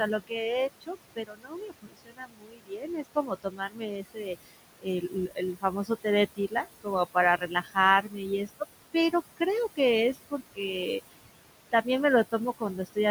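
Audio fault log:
Throughout: noise suppressor artifacts. Room noise, sitting about 12 dB under the speech, is pulled down by about 20 dB in the gaps and rises under speech; spectrogram shows flickering, patchy noise bands.
0.27–0.49 s, 0.81–8.61 s, 10.14–10.6 s, 12.32–12.97 s: speech cut by the noise suppressor. Quiet speech was treated as noise and dropped up to about 22 dB, leaving faint, swallowed sounds; waveform shows sudden dips inside speech. The long middle stretch loses roughly four seconds in total, and each of the others loses a fraction of a second.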